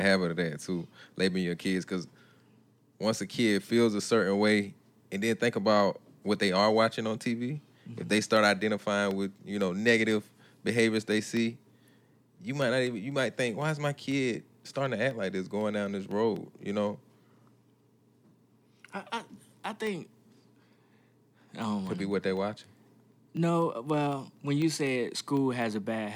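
From 8.37 s to 25.87 s the speech carries periodic USB or driver dropouts. Every 0.25 s, four times a second, a sliver of audio disappears. Each gap is tiny, only a small fraction of a millisecond, and is filled with silence. Something is stalling the USB bus or the audio driver on a fixed schedule. The result is a steady train of ticks, about seventy in all, heard only while speech is sounding.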